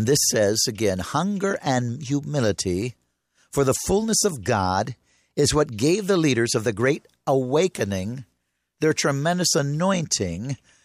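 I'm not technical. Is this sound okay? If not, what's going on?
No. There are two tiny ticks, at 3.58 and 4.29 seconds. Each is a bit error spike. One digital value in the speech got corrupted for a single sample, then snapped back. That brief jump is heard as a sharp click unrelated to the speech.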